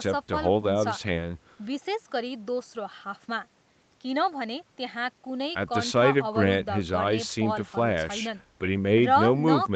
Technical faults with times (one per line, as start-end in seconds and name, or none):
none